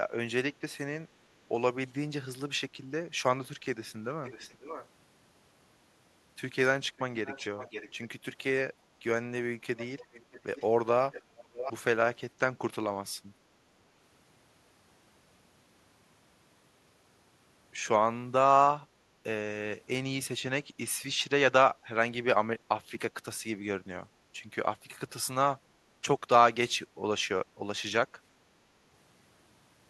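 Echo leak occurs at 4.25–4.87, 7.26–7.92, 9.77–10.66, 11.12–11.22 and 11.41–11.73 s. Copies of the speech trail 544 ms behind at first, then 629 ms, and sit about 10–20 dB below the direct speech. The likely cause is a far-end echo canceller passing loudspeaker pickup back. On a spectrogram these show as weaker ghost syllable patterns shifted right.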